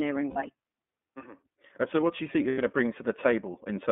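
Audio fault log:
throughout iLBC codec: a narrowband coder with its bandwidth limited to roughly 200 Hz to 3.5 kHz, giving muffled, rough, slightly synthetic speech that fits the 13.33 kbps, 30 ms-frame mode.
0.30 to 0.37 s and 2.49 to 2.59 s lost iLBC frames: packets dropped for 60 ms, then 90 ms, and the decoder repeated the last pitch cycle with noise, a held buzzy vowel that recovers at once.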